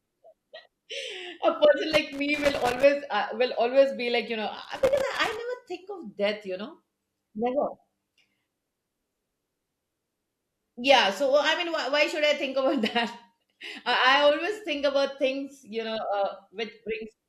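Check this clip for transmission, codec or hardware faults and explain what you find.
There's loose connector crackle in two bursts, 1.92 to 2.84 s and 4.64 to 5.39 s: a dirty contact making and breaking, chopping the speech into irregular scratchy pops.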